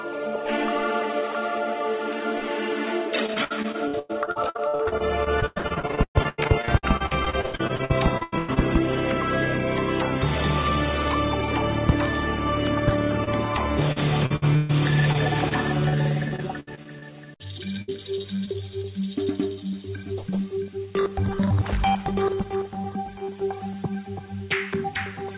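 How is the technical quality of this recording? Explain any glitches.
The recording has clear packet-loss damage, and the whole clip stops at 4 kHz, which fits a G.711 A-law call path at 64 kbps.

Repeated packet loss (robotic sound) runs from 3.26 to 8.58 s, 13.93 to 14.71 s, 15.89 to 17.04 s and 17.48 to 18.49 s. These stretches sound choppy, with pieces missing. Packets kept arriving lost or late. Each hole, up to about 130 ms long, was patched by extending the previous sound. In the first stretch, 48 gaps filled about a third of the time.

Short concealed packet loss occurs at 13.24 to 13.29 s, 15.13 to 15.17 s and 15.49 to 15.53 s. Each is a brief smear or wobble. About 20 ms of audio failed to reach the decoder in time, so the receiver continued the last sound briefly and then blended back into the real signal.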